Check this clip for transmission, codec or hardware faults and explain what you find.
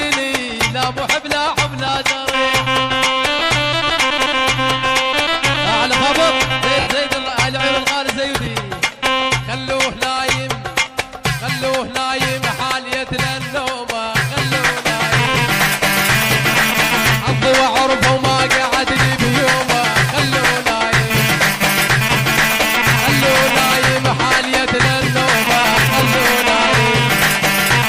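There are lost LE Audio frames at 1.87 s, 3.39–3.41 s, 6.80–6.87 s, 8.45–8.47 s and 25.45–25.47 s. The decoder fills each gap by repeating the last spectrum with scrambled phase, so the sound smears briefly into noise. The 70 ms gap fades, and the dropout lengths fit 10 ms frames.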